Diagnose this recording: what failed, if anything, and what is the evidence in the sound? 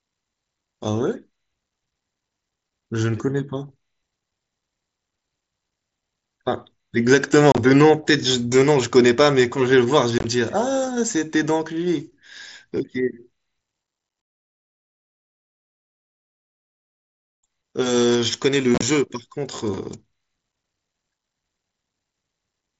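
Three brief spots where the speech breaks into a rough, chopped stutter with hard-edged holes: 7.52 to 7.58 s, 10.18 to 10.24 s, and 18.75 to 18.82 s. Each spans 60 to 75 ms, with gaps as long as 30 ms. This is unconcealed Bluetooth headset packet loss on the wireless link. Short voice packets, consistent with 7.5 ms mSBC frames, failed to arrive and were filled with silence rather than concealed. Elsewhere the wideband mSBC audio carries light codec graininess.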